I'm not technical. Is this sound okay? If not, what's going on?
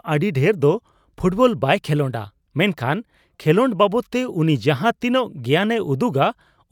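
Yes, this sound is okay, with nothing wrong going on in it.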